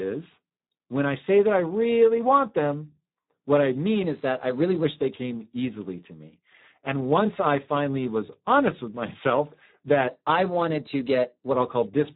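The whole recording has passed through the Speex codec at heavy compression, consistent with a low rate of around 8 kbps, too few bits to model the excitation properly. The speech sounds hoarse, noisy and partly robotic, with nothing above 3.8 kHz.

From 10.07 s to 11.54 s, just after "was honest with myself", a clock-matching stage likely made a drift correction step, jumping the playback rate by about 6.5%. The speech runs faster and sits 108 cents, about a semitone, sharp, then snaps back.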